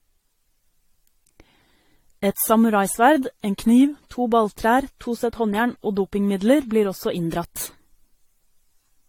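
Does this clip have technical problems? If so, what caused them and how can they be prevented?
Yes. Throughout, the speech sounds swirly and hollow with blurred attacks, likely generation loss from AAC-LC re-encoded around five times at 64 kbit/s; a spectrogram shows nothing above 16.6 kHz and smeared transients. Prevent it by keeping a lossless master and encoding only once.

From 3.48 to 4.02 s the audio slows by 5.55% and drops 99 cents, then snaps back. From 7.18 to 8.45 s, right after "dopingmidler blir også", it speeds up by 5.55% and rises 94 cents. Both are likely drift correction steps, where clock-matching software changed the playback rate in one jump. On a spectrogram, harmonics step down or up by roughly a semitone at those edges. Prevent it by using a shared clock or smooth, gradual resampling.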